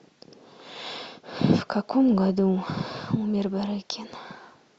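From the first moment to the end, the speech sounds dull and carries a gurgling, granular grit. The top end keeps dropping out and coming back, as if parts of the treble flicker on and off, and what's left sounds coarse. That's most likely MP2 compression run too lean, with Layer II's sub-bands starved of bits so upper bands switch off. The damage is plainly audible and fits a bitrate around 80 kbps.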